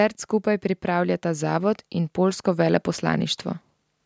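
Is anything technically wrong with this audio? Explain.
Yes. From 0.45 to 3.36 s there is automatic gain rising: the gain control judged the input too quiet and pushed its gain up gradually, by about 5 dB. Speech and background noise swell together, getting steadily louder across those three seconds rather than jumping.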